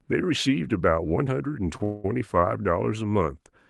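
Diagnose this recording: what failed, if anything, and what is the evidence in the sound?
Short stall from a late packet, network and jitter buffer stage: at 1.77–1.82 s, sound is held about 23 ms too long, so nothing is lost but timing slips.

Call audio freeze, same stage: from 1.84 to 2.06 s, a fading buzz or hiss fills 202 ms, likely packets held in transit, before the sound resumes where it stopped.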